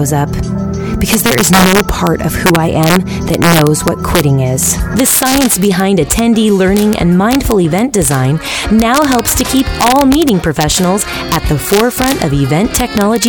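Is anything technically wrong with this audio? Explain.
Yes. The audio suffers from integer overflow throughout. The signal is driven about 3 dB past the largest value the integer format can hold. When a peak crosses that limit, it is not held at the ceiling. Instead it wraps around to the opposite extreme. Only a small fraction of samples, well under one percent, go over. Each one still jumps across the full range. The loudest moments therefore carry violent, sharp cracks, harsher and more abrupt than ordinary clipping.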